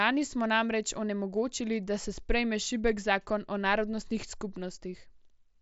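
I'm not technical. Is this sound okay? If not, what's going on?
Yes, this sound is okay, with nothing going wrong in it.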